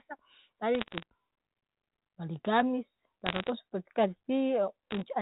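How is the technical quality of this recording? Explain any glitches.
The recording has three short bursts of bit errors on a digital phone line. The G.711 telephone coding underneath sounds narrowband, with nothing above 4 kHz.

The bursts run from 0.75 to 1.03 s, from 3.26 to 3.49 s, and from 4.91 to 5.02 s. In the first and last, roughly one bit in every couple of hundred is flipped, and in the second about one in 140. Every flipped bit corrupts a single 8-bit sample. When a high-order bit, or the sign bit of a loud sample, is hit, that sample jumps far off the waveform and produces a sharp tick, and clusters of ticks sound like crackle. The speech keeps running through the crackle without any gap, which separates this from packet loss, where sound drops out or gets patched over.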